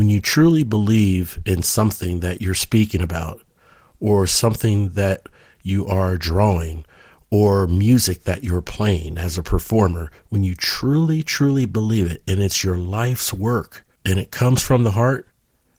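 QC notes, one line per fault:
No faults heard anywhere in this speech recording.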